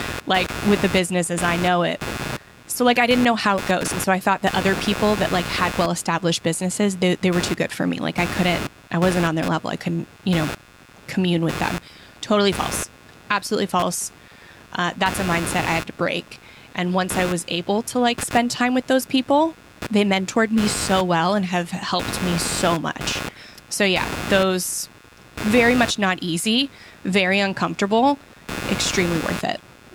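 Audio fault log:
Throughout, computer activity noise: a buzzing, scratchy layer pulses about a hundred times a second under the speech, sitting only about 10 dB below it. It follows the computer's load, not the speech. Processor or graphics activity is shifting the shared ground of the audio circuit.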